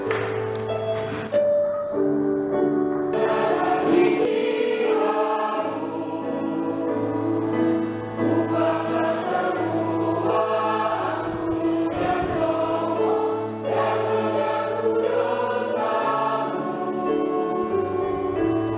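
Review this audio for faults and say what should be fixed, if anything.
Nothing needs fixing; no faults can be heard here.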